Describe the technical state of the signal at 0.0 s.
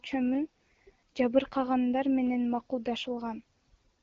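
At 0.0 s the signal is intact, with no fault present, and it carries the light coding character of the AMR wideband (HD Voice) codec at 12.65 kbit/s.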